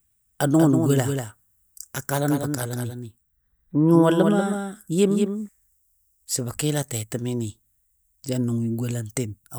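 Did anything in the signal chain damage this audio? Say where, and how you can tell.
Yes. From 0.59 s to 5.49 s the speech is mixed in twice, a doubled audio track. The cause is likely a second, slower capture path, or an edit that left two copies running out of step. A full-band duplicate trails the original by about a fifth of a second, roughly 5 dB quieter, with no decay or room colouring. It cuts in and out abruptly at both boundaries.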